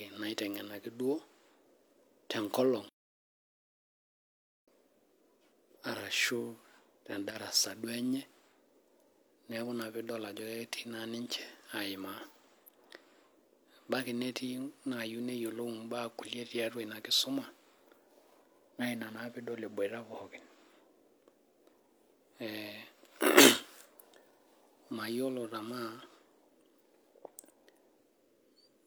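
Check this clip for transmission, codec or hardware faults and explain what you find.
One fault stands out in the speech. One channel drops out from 7.31 to 7.36 s: the level falls abruptly by about 6 dB, likely because one stereo side vanished briefly and halved the mono sum.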